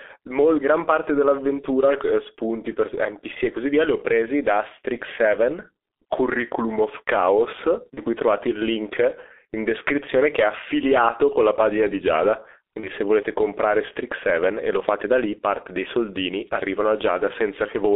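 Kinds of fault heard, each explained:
G.723.1 codec: The whole clip carries the sound of this early internet-telephony codec, running at about 6.3 kbit/s and coding speech in 30 ms frames. The band is held to roughly 300 Hz to 3.6 kHz, so the voice sounds thin and muffled. The damage is heavy. Its coarse, slowly updated voice model leaves the speech hoarse and rough, and consonants lose their edges and smear together.
VoIP packet loss concealed by the speech codec: Speech packets went missing twice, at 7.94 s and 12.80 s, each costing one 30 ms frame. The decoder filled each gap by repeating its last pitch and filter settings at falling gain. The speech briefly turns into a stretched, buzzy tone or coloured noise that fades. Because each frame depends on the one before, the distortion outlasts the lost packet, running to about 8.00 s and 12.89 s.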